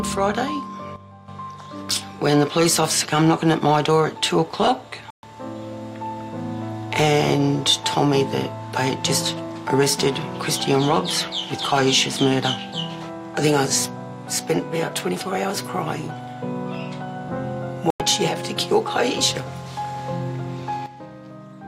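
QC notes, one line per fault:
0.96–1.28 s, sudden gain jump: sound and background noise drop together by about 10 dB with no fade, likely a gain setting applied instantly without a ramp.
5.10–5.24 s, digital broadcast dropout: the sound cuts to silence for 128 ms, which fits four lost frames, as the receiver mutes until good data returns.
17.90–18.00 s, digital broadcast dropout: a 96 ms hole of silence, consistent with about three lost frames; the receiver muted, so that stretch of sound is gone.
20.86 s to the end, sudden gain jump: the level of the sound and its noise floor falls abruptly by about 12 dB, likely an unramped gain change, and stays down.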